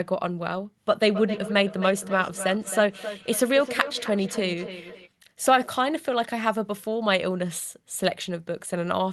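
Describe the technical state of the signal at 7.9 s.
At 7.9 s the signal is intact, with no dropout, click or distortion, only the expected character of the call path, whose top end stops around 12 kHz as an Opus-style codec at roughly 32 kbps would produce.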